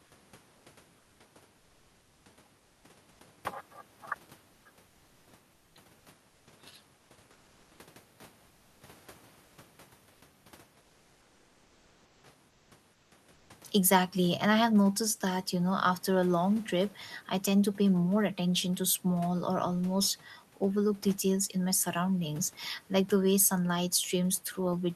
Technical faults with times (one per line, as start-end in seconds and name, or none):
1.57-2.25 comfort noise in place of the background
3.11-3.19 comfort noise in place of the background
4.53-4.65 comfort noise in place of the background
5.53-5.75 comfort noise in place of the background
8.47-8.81 comfort noise in place of the background
10.13-10.21 comfort noise in place of the background
10.81-12.23 comfort noise in place of the background
12.49-13.49 comfort noise in place of the background